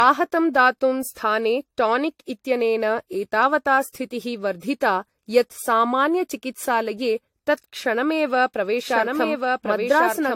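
From start to finish the speech sounds swirly, hollow and smeared, with soft attacks and nothing above 16.6 kHz. That likely points to generation loss from about four AAC-LC passes at roughly 64 kbit/s.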